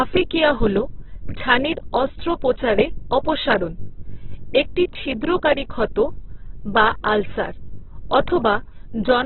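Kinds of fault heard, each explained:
Opus compression: Throughout the speech, nothing reaches above 4.1 kHz. Voiced sounds come out grainy, rough and noisy, with little swirl. The damage is heavy. This likely comes from Opus in its music mode, squeezed to narrowband, which fits a rate near 8 kbps.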